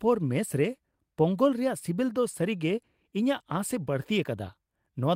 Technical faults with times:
none

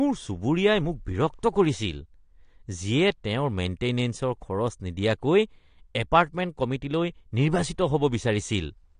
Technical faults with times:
0.00-9.00 AAC compression

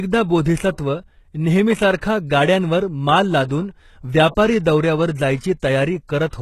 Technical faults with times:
0.00-6.42 HE-AAC compression

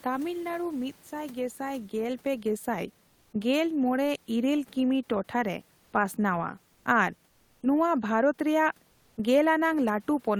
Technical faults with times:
0.05-1.03 automatic gain falling
1.09-3.43 automatic gain rising
8.91-9.17 comfort noise in place of the background

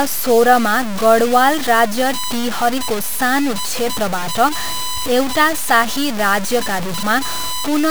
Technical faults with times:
0.00-7.91 USB whine
0.00-7.91 low bit depth without dither

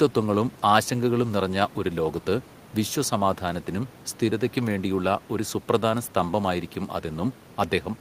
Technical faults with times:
none

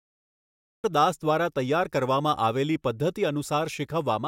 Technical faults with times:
0.00-0.84 cut-off start

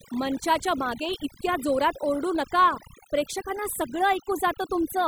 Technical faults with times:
0.00-5.07 overdone noise removal

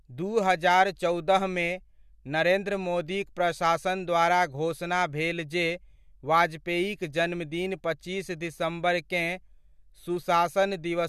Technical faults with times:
none

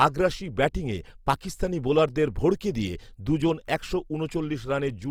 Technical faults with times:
0.00-5.10 Opus compression

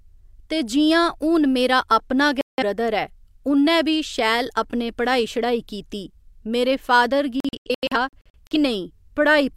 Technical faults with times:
2.41-2.62 digital broadcast dropout
7.40-8.56 digital broadcast dropout

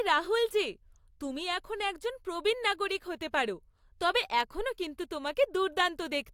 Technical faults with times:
none

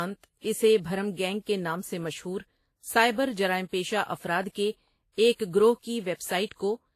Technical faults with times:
0.00-6.95 transcoding between lossy codecs

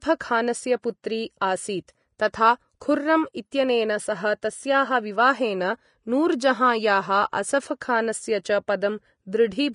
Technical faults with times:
0.00-9.75 Vorbis compression
1.03 pre-echo
2.80 pre-echo
4.42 pre-echo

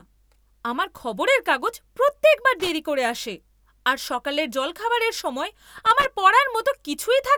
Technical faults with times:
2.60-2.69 loose connector crackle
5.78-6.05 loose connector crackle

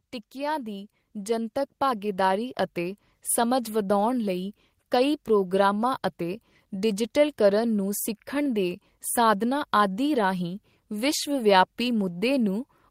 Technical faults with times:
0.32-3.07 automatic gain rising

